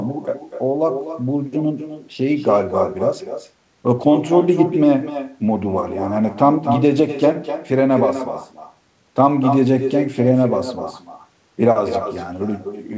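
Speech heard over a call path band-limited to 8 kHz shows echo with no canceller throughout: the far end's loudspeaker feeds its microphone, and each phrase returns roughly 300 ms later as a thinner copy about 9 dB below the direct speech.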